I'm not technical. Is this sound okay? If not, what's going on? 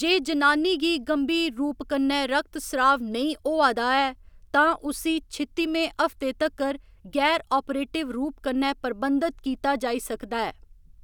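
Yes, no audible faults here.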